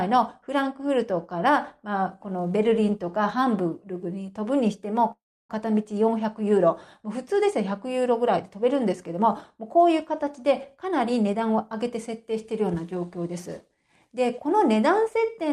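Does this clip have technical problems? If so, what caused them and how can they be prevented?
Yes. From 5.11 to 5.51 s the sound stops, trails off as a brief fading buzz, then holds about 310 ms of silence before resuming where it left off. This is a call audio freeze, likely from delayed packets draining the jitter buffer. A larger adaptive jitter buffer or a more stable network path prevents it.

From 10.82 to 11.84 s a jitter buffer speed-up plays the audio at 106% speed with unchanged pitch, trimming about 70 ms of pitch-period segments to reduce the delay the earlier stall built up. Steadier packet delivery, or spreading the catch-up over a longer stretch, keeps it less noticeable.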